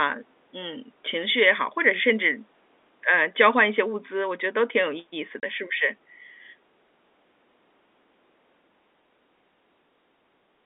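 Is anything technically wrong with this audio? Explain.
Yes. At 5.40 to 5.43 s there is packet loss filled with silence: a 30 ms hole, which fits one lost packet, where the receiver substituted silence. Unlike concealment, which smears or repeats sound across a gap, this drops out completely, with hard edges. The narrow telephone band of the G.711 line, roughly 250 Hz to 3.6 kHz, is heard throughout.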